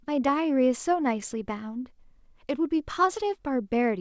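Clock drift between sender and receiver runs through the whole clip: the sender's audio clock is slow by roughly one and a half percent, so the receiver's jitter buffer keeps draining and has to be topped up to avoid running dry, leaving small timing hiccups at uneven intervals.

From 0.30 s to 4.0 s the receiver answers with repeated timing corrections, repeating short slivers of the speech so playback runs at about 99% speed and stretches by around 50 ms. Each repeat is tiny, heard if at all as faint stutters and a slightly dragging, unsteady pace over the G.722 call path, which carries nothing above 8 kHz.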